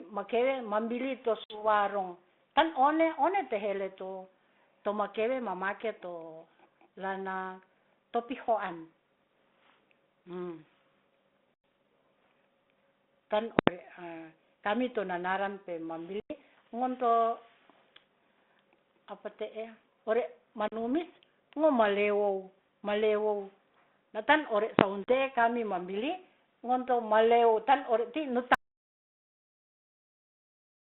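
Over this G.726 call at 32 kbit/s, squeezed into a 200 Hz to 3.6 kHz band, the first packet loss on an ADPCM call hits at 1.44 to 1.64 s: a hard-edged hole of about 60 ms, a few packets gone. It comes back at 11.54 to 11.64 s, 16.2 to 16.34 s, 20.68 to 20.76 s and 25.04 to 25.10 s, with holes of about 100, 100, 40 and 40 ms. Each time the decoder's predictor and step size drift away from the sender's, so the speech returns with a click, a bit of distortion or the wrong level, then settles within some tens of milliseconds.

At 13.59 to 13.68 s you get invalid numbers at full scale. Some calculation threw out infinite or invalid values that got pinned to the maximum sample value, so for about 85 ms the output sits flat at one extreme value, far beyond the speech peaks. That's heard as a loud pop going in and another coming out with nothing in between, which fits a 4096-sample block. It happens again, shorter, at 24.79 to 24.81 s, right before "te'e kami". 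That one only lasts about 21 ms, so it lands as a single bang and fits a 1024-sample block.

Then from 28.55 s to the end there's an audio dropout to silence: the speech just cuts off mid-flow into silence, no room tone at all. The likely cause is the input getting lost, through a disconnected device, a failed link or a stray mute, while the recorder kept writing silence.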